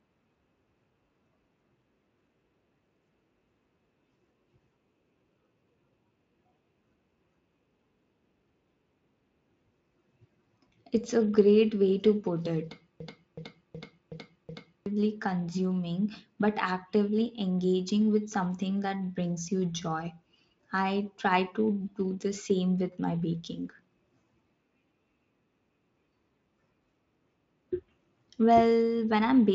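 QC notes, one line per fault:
13.00–14.86 s system hang loop: after "way to put it" a stuck 0.37 s buffer stutters five times at 2.69 Hz; identical waveform blocks, repeating spectrogram columns.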